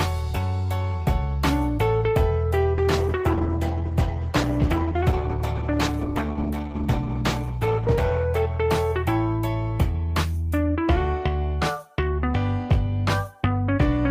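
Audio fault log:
2.79–9.07 s, call bitrate drop: the encoder was starved of bits, which fits a fall from 32 to 11 kbps, leaving the sound coarse and muffled for about 5.2 s.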